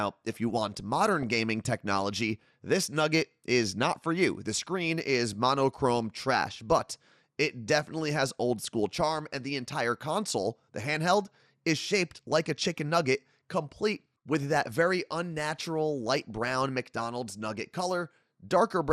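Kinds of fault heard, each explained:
MP2 compression: The speech sounds dull and muffled throughout, with a gurgling, granular roughness that is plainly audible. The likely cause is MPEG Layer II coding at a low rate, around 80 kbps. The encoder divides the signal into 32 sub-bands and rations bits between them. Short of bits, it switches upper bands off and quantises the remaining ones coarsely, so the top end flickers and thins.
DAB burbling: Brief bursts of burbling noise cut across the speech at 1.23–1.38 s, between "if you want" and "technology this nugget is". A short blip follows at 11.27 s, then bursts at 14.33–14.43 s just before "that very unnatural" and at 16.19–16.30 s just after it. Occasional bit errors from weak reception slip past error correction and corrupt sub-band samples, putting short blips of noise into single bands.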